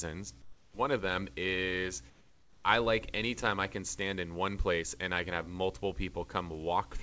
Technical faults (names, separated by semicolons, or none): comfort noise in place of the background